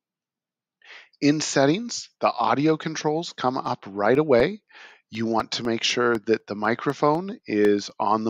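The audio carries periodic USB or driver dropouts from 3.65 s to 8.15 s. About every 0.25 s, roughly a millisecond of signal vanishes into silence, giving a steady train of around twenty small ticks. A background task stalling the USB bus or audio driver at a fixed interval would cause this. On a waveform each loss shows as a tiny flat gap at regular spacing, and a spectrogram shows evenly spaced thin vertical broadband lines.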